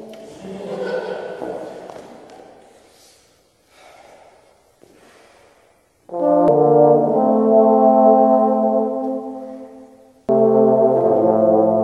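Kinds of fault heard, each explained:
Damaged data in a compressed stream: some of the encoded bytes reaching the decoder were corrupted or lost, so it could not read those frames, lost its place in the stream and had to hunt for the next valid frame header. Each time this happens the decoder produces a brief glitch instead of the intended sound, a short disruption lasting only an instant, heard twice here, at 6.48 s and again at 10.29 s.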